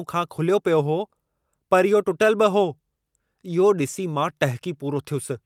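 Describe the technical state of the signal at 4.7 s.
At 4.7 s the speech signal is intact, with no technical fault present at that moment.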